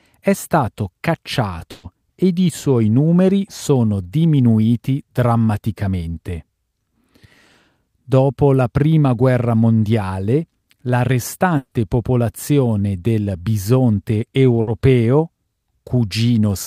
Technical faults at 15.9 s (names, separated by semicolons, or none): none